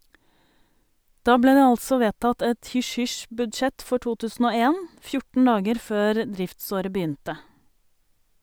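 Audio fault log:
No faults are heard in the speech. Nothing in the audio calls for an entry in this log.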